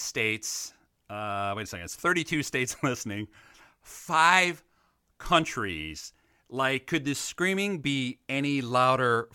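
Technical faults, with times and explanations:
No technical faults detected.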